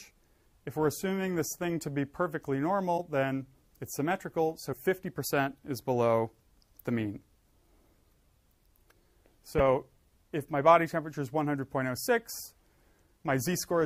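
At 2.97–3.00 s, 4.72–4.75 s and 9.58–9.61 s the audio jumps ahead through a brief glitch about one 26.1 ms frame long, likely a broken MP3 bit reservoir: the decoder reads borrowed bytes from the wrong frame. Each shows as a thin vertical smear and a waveform discontinuity.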